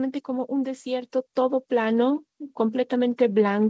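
At 1.02 s the level rises abruptly by about 5 dB: the microphone volume was stepped up. The call software judged the input too quiet and raised the device's capture gain in a single step, so the speech and the background noise floor jump together rather than the talker getting louder. It is heard as a sudden, sustained lift in loudness partway through the speech, with no fade. The call path keeps the band limited to 8 kHz, consistent with a wideband codec such as G.722.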